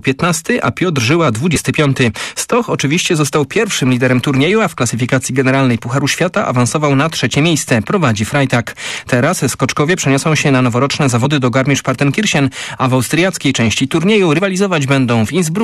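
At 1.56 s, again from 11.24 to 11.26 s, and at 14.38 s, the audio breaks into a brief chirp or squawk, each lasting about 20 ms. These are damaged data in a compressed stream: corrupted bytes make the decoder misread those frames and lose sync until it finds the next valid frame header. On a spectrogram each shows as a thin vertical smear of broadband energy; the waveform shows a short, jagged burst.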